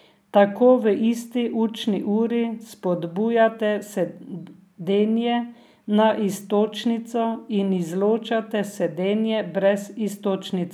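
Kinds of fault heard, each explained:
No technical faults heard.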